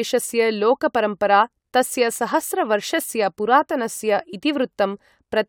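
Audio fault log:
No technical faults can be heard anywhere in the speech, and the signal stays steady and continuous throughout.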